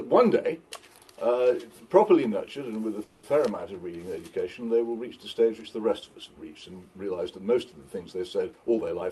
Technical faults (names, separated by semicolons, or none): call audio freeze; jitter buffer speed-up